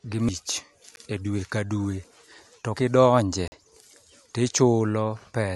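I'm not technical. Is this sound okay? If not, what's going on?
No. The speech has two blocks of digital silence, where the sound suddenly drops to nothing and snaps back. At 0.96 s the gap lasts about 14 ms and sounds like a tick. From 3.48 to 3.52 s it lasts about 43 ms, a short hole. The program likely didn't deliver its audio in time.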